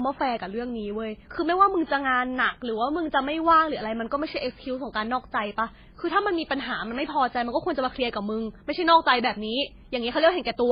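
Throughout the speech, two kinds of coding damage sit on top of each other. Smeared, warbly highs mix with a dull, narrow top end. This is likely transcoding between lossy codecs. It fits low-bitrate MP3 re-encoded as HE-AAC, which keeps the lower cut-off.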